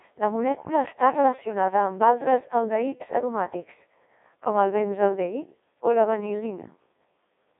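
From start to finish, the speech has passed through a Codec 2 vocoder. The waveform itself is not carried. Only pitch, voicing, energy and a rough spectral envelope survive, and the decoder rebuilds the voice from sine waves. The result is robotic and buzzy, with heavy damage. The harshness fits a very low rate near 1.2 kbit/s. The band runs from 300 Hz to 3.7 kHz, and nothing is present above 3.8 kHz.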